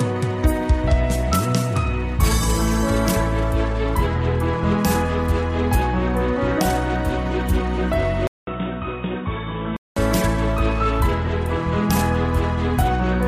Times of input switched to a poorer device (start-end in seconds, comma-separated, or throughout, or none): 8.27-9.96